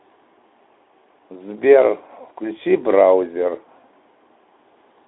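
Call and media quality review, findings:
No findings: the speech comes through the Speex call path within its narrow telephone band, with nothing above about 3.8 kHz, and nothing to raise.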